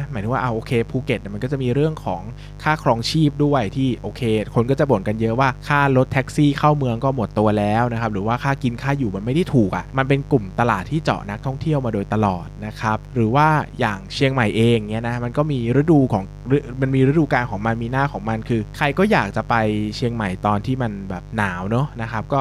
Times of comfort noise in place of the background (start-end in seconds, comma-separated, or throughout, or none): none